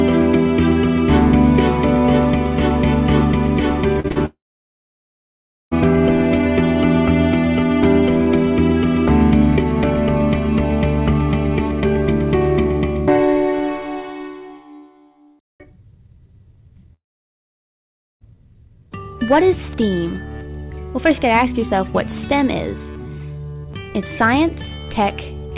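At 4.00, 4.08 and 4.12 s, three closely spaced short concealed packet losses hit the audio, each replacing roughly 20 to 40 ms that arrived too late. The receiver extended the preceding sound to bridge each gap, producing a quick smear and wobble.

From 4.26 to 5.73 s, the audio cuts out in what is likely a long network dropout. A brief fading continuation of the last sound gives way to about 1.3 s of silence, and the audio resumes with that stretch missing.

A second dropout of the same kind runs from 16.93 to 18.36 s. There is again a short concealment tail, followed by roughly 1.2 s of silence, and the audio returns without the lost portion. Throughout the clip the band stops at 4 kHz, consistent with a G.711 mu-law call path.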